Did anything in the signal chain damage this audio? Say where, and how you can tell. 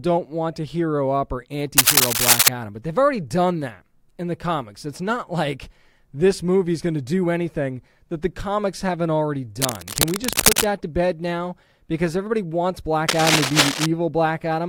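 Yes, cable scratch noise, at 1.77 to 2.49 s, 9.60 to 10.64 s and 13.08 to 13.86 s. Each burst is dense, irregular crackle laid over the speech: roughly 5 dB louder than it in the first, and about level with it in the other two. The stage is the analogue wiring. The likely cause is a worn cable or connector being moved, its contact resistance jumping erratically and injecting ragged noise until the contact settles.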